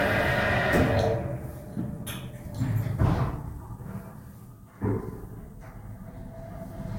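From the start right through, there's generation loss: the sound has a swirly, hollow smear, blurred attacks and nothing above about 16.6 kHz. It likely went through Vorbis at around 63 kbit/s roughly three times, each re-encode stacking fresh quantisation damage.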